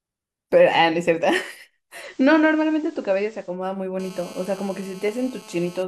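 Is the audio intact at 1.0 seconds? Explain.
Yes, the speech at 1.0 seconds is intact, with no dropout, click, distortion or other fault to be heard at that moment.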